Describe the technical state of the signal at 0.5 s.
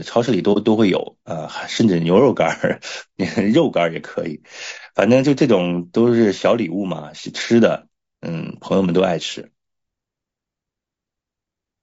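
AAC frame loss with muting occurs from 0.53 to 0.57 s. The decoder received no usable data for this stretch, which points to a single lost frame, so it zeroed that frame's spectrum. The overlapping transform windows fade the sound down and back up, leaving a brief dip about 30 ms long at its core. It is only a brief gap in the speech.

Low-delay AAC compression shapes this moment as it does the whole clip. The damage is plainly audible and is likely from AAC-ELD, the low-delay codec used in video calls, at a rate that fits about 32 kbps. At that low bitrate the speech sounds rough and grainy around the gap, with noise filling the spaces between harmonics and a thin, synthetic-sounding top band.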